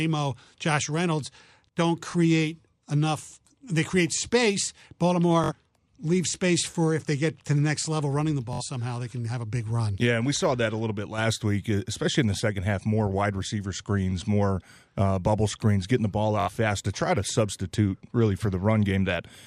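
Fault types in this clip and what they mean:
Bluetooth stutter: a single brief repeat at 2.11 s, then 64 ms machine-gun stutters at 5.44, 8.53 and 16.40 s, built from repeated slices of about 21 ms. Lost or late wireless packets made the receiver replay its last buffer, then jump ahead.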